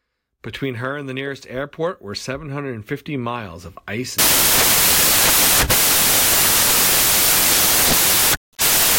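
Samples built from the wrong bytes take over this speech clip from 4.19 s, just after "miles of ice," to the end: misassembled bytes turn the low bits into loud, harsh broadband noise.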